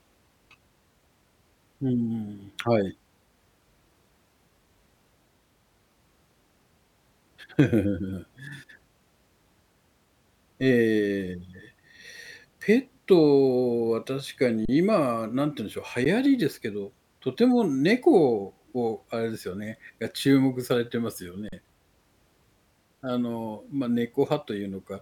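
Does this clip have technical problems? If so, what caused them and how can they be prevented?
Yes. The speech briefly freezes into a flat, steady level without a sharp click at 14.65 s for about 35 ms, at 16.05 s, and at 21.49 s for about 39 ms. This is an underrun with held sample. The output buffer ran dry, and the converter held its last value until data returned. Playback then resumed where it stopped, so nothing is skipped. The 12 ms stall fits a 512-sample buffer. Using a larger output buffer, or giving the audio thread higher priority, prevents it.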